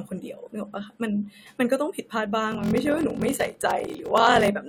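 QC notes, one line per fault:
2.5–4.48 s, block size mismatch (padded): a steady 43.1 Hz buzz sits under the speech, which drags to 0.861 of normal speed at roughly its usual pitch. Each block is written short and zero-filled to a larger read size, consistent with 1024-sample reads, inserting a gap every block.
3.87 s, overlap between stream segments: a brief click or tiny skip as the waveform jumps. Two segments, 4 s long, have overlapping time stamps, and the player trims the overlap, discarding a few milliseconds of sound that was never actually duplicated.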